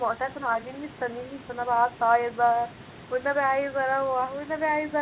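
Throughout the speech, a faint copy trails about 0.31 s behind, roughly 30 dB down. It is an echo leak. The far end's loudspeaker sound likely reached its microphone and slipped past the echo canceller. It is heard within the narrowband call audio, cut off at 4 kHz.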